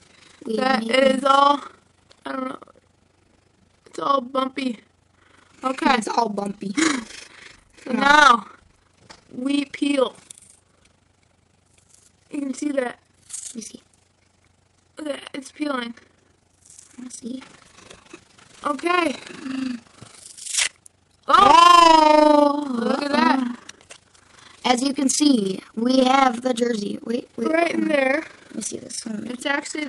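From start to finish the audio carries overlap-add ripple: frames were rejoined with an overlap that doesn't sum to constant gain, so level swings by about 11 dB roughly 30 times a second. Its rigidly steady frame-locked rate and lack of gaps separate it from dropouts.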